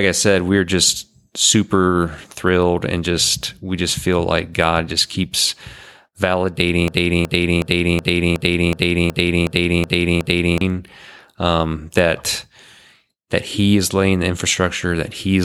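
From 6.88 s to 10.61 s the speech falls into a broken-record loop: a fragment of about 370 ms plays ten times back to back, identical each pass, and whatever should have been heard in those seconds is gone. The likely cause is a stalled player or stream resending its last buffer. On a spectrogram the same patch of energy tiles across the region at a fixed spacing, and the waveform shows one block copied end to end.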